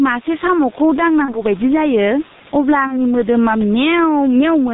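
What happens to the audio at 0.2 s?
At 0.2 s two faults are at work, and neither is confined to that moment; both run through the whole clip.

The input gain is likely set far too high, so a fast compressor or limiter keeps clamping it down whenever the speech gets loud. That gain pumping makes the level swing by around 10 dB. The room noise sits about 29 dB below the speech, and the speech is left squashed, with the loud and soft parts pressed toward one level.

The speech has also passed through the G.723.1 codec at 6.3 kbit/s. It carries the signal in 30 ms frames, cuts everything above 4 kHz and updates its model of the voice only slowly, which causes heavy damage at this rate. The result is muffled, hoarse-sounding speech with smeared, indistinct consonants.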